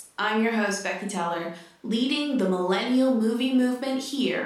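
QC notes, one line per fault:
No fault found in this speech clip.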